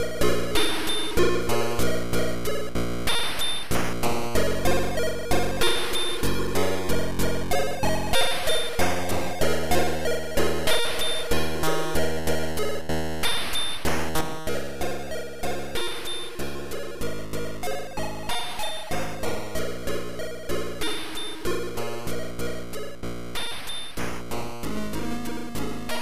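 A digital gain change was likely applied at 14.21 s without any ramp, stepping the level down by about 6 dB between one sample and the next. From there to the end, the sound and its background noise drop together abruptly, a sudden gain jump.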